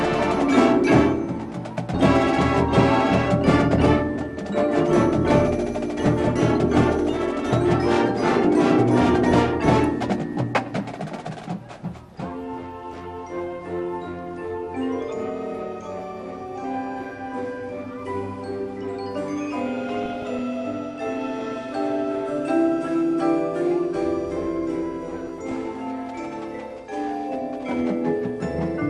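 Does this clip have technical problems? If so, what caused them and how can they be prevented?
Yes. All the way through, the sound is dull and carries a gurgling, granular edge that's plainly audible: upper sub-bands drop in and out, and what's left is coarsely quantised. That's likely MP2 compression, with the amount of damage fitting a low rate of around 80 kbps, where the encoder doesn't have enough bits to keep every band running. To prevent it, broadcast or capture the stream at a higher MP2 bitrate, or use a more efficient codec.

On top of that there's DAB burbling in five short patches: 6.06 to 6.29 s, 8.23 to 8.47 s, 12.92 to 13.05 s, 19.89 to 20.39 s and 25.27 to 25.68 s. Weak reception let bit errors, somewhere around a few tenths of a percent, slip past the error correction into the MP2 data. The corrupted samples and scale factors make individual sub-bands blip and jump in level, which gives that watery, bubbling texture. 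A better antenna position or a stronger multiplex signal would keep those errors out.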